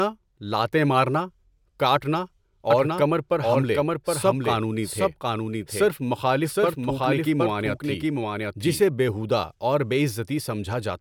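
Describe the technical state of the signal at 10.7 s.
At 10.7 s the signal is intact, with no audible fault at that moment.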